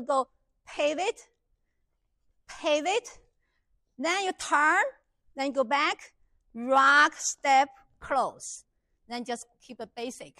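No technical faults can be heard anywhere in this audio.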